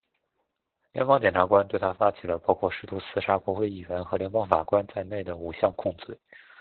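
From start to finish the speech has passed through heavy Opus voice compression. The SILK coder is working narrowband, cutting everything above about 4 kHz and coding the excitation coarsely, which fits a bitrate near 8 kbps. The result sounds muffled, hoarse and faintly robotic.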